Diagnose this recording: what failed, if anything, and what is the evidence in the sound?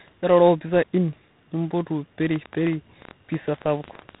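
Tandem speech coding affects the whole clip, at the codec stage. The speech sounds rough and noisy, and there is nothing above 3.8 kHz. The layered degradation points to two speech coders in series, which fits a CVSD leg followed by G.726 at about 24 kbit/s, with a G.711 A-law hop between them. At each border the audio is decoded and re-encoded, so every coder adds its own quantisation error on top of the previous one's.

A train of clicks runs from 2.36 s to 4.16 s. There are around twenty similar pulses, arriving about 10 times per second at uneven spacing. They peak roughly 10 dB above the speech and tick through the gaps as well as over the talking. That pattern of repeated, same-shaped impulses is likely caused by electrical interference or a struggling interface somewhere in the analogue or converter path, independent of the speech itself.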